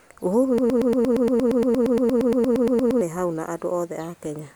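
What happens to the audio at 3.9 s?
Nothing goes wrong at 3.9 s; the speech there plays through intact, with no dropout, click or distortion.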